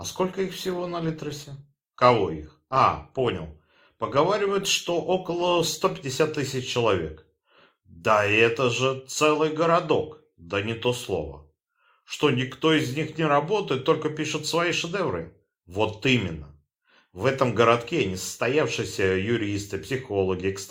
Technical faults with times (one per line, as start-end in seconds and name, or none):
0.00-6.00 adaptive stream starting at a low bitrate